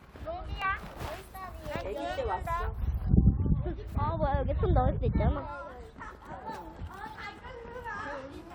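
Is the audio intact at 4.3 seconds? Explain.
Yes, the audio is intact at 4.3 seconds, with no fault at that moment.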